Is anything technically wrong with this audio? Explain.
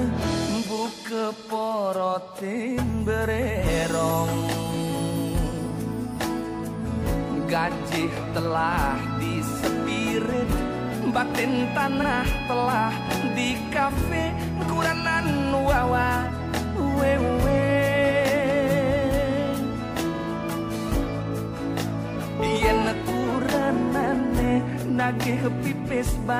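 Yes. There are repeated frames at 12.01 s and 20.13 s. A block of about 46 ms, which fits a single compressed frame, plays again. At 12.01 s it plays once more, and at 20.13 s twice more. Each repeat is a brief stutter, and the audio runs longer by the repeated time.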